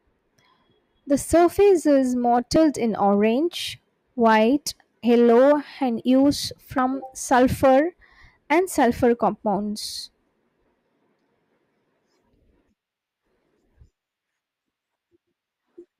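At 2.56, 6.78, 13.04 and 14.96 s the speech jumps ahead, skipping a few tens of milliseconds each time, likely a dropped buffer (overrun).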